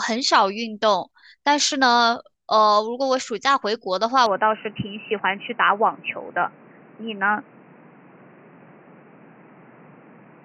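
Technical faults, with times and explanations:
4.26 to 10.45 s, input switched to a poorer device: a narrower-band input likely takes over without a gap, cutting everything above 3 kHz, so the speech turns dull and boxy, with a faint new noise floor.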